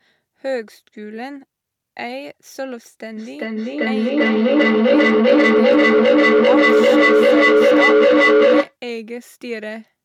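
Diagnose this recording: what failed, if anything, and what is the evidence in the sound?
Feedback echo between two devices, at the call-processing stage: from 3.17 to 8.77 s the sound returns roughly every 0.4 s. It builds to about 14 dB above the speech because one device's output re-enters the other's microphone.

Bluetooth SBC bit pool drop, at the codec stage: from 4.07 to 5.73 s the treble dulls and gritty noise rises. That fits the bit pool falling from 28 to 13, near 102 kbps.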